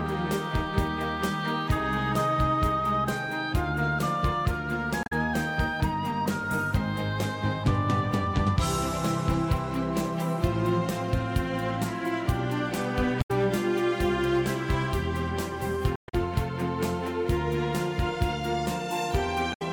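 At 5.03–5.12 s, 13.18–13.31 s, 15.93–16.15 s and 19.50–19.62 s, damaged data in the compressed stream makes the decoder misread frames and lose sync, giving short glitches heard as a chirp, squawk, click or brief hole that show as abrupt breaks on a spectrogram.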